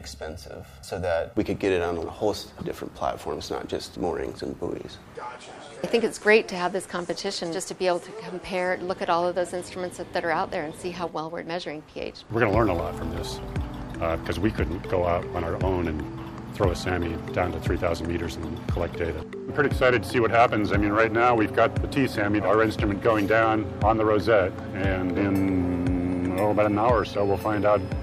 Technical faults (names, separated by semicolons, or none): channel delay (comb filtering)